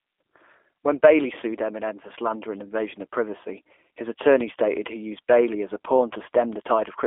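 Throughout, the speech sounds rough, buzzy and slightly synthetic, thin at the bottom and dull on top, with nothing above 3.6 kHz. That is G.729 codec damage: the speech is rebuilt from a vocal tract filter, a pitch predictor and a few pulses per frame, squeezed into a 300 to 3500 Hz line band. The coding points to roughly 8 kbit/s G.729A.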